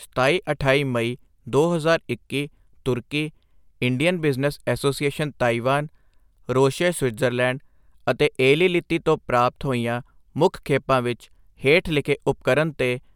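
No technical faults are audible anywhere in the speech recording.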